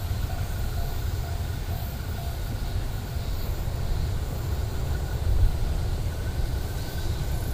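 Nothing is technically wrong with this audio.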